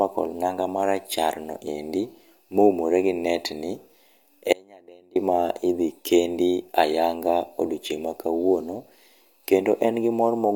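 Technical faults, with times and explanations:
4.53–5.16 s, audio dropout to a faint residue: the speech cuts out abruptly for about 630 ms, leaving only a faint sound roughly 30 dB below normal level, then returns mid-flow on "ma idhi kendi ayanga". The path stayed live while the signal was likely interrupted upstream.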